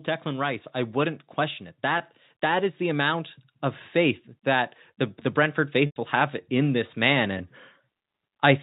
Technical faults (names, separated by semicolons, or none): packet loss with pitch repetition; automatic gain rising